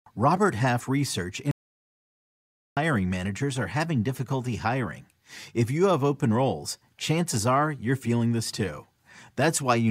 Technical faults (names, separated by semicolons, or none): audio dropout to silence